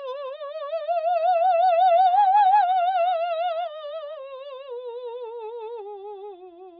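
Nothing in this bit of music stands out as a technical fault, so there's nothing to point to here.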